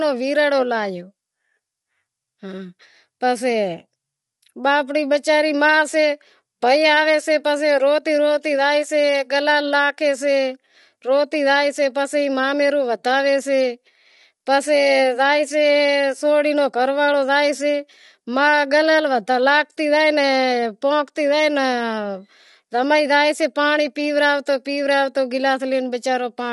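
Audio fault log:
Throughout: low-delay AAC compression. The speech sounds rough and grainy, with noise filling the gaps between harmonics, which is likely from AAC-ELD at around 32 kbps. On a spectrogram, harmonics look smeared and nothing appears above 11.6 kHz.
1.03 to 26.48 s: clock slip clicks. Faint ticks recur about once a second, around twenty in all. Each is likely one sample dropped or repeated as two unsynchronised clocks drift, fitting an error of roughly 15 ppm. They show as tiny waveform steps and thin vertical spectrogram lines.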